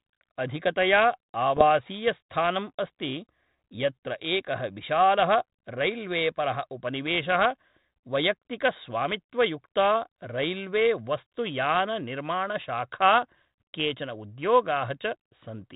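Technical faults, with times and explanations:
1.57 to 1.65 s and 12.61 to 12.65 s, bit errors on an ADPCM link: two short pops, each with a rough, crackly burst and a brief jump in level. The first lasts about 80 ms and the second about 35 ms. A small share of corrupted bits, well under one percent, knocks the decoder's adaptive step size and predictor off track, so each error keeps ringing for several milliseconds. The band-limited telephone sound around them fits G.726 ADPCM at 32 kbit/s.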